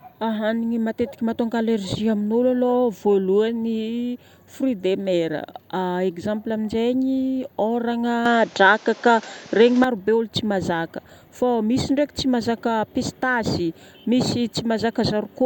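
Speech, with a band-limited stretch from 8.26 s to 9.84 s where the sound turns duller and boxier, with nothing above 7.6 kHz, then opens up again. The change happens without any gap, the level shifts by around 5 dB, and a new noise floor appears roughly 30 dB under the signal. This is likely an input switched to a poorer device, with the system briefly moving to a narrower-band microphone with its own tone and background noise.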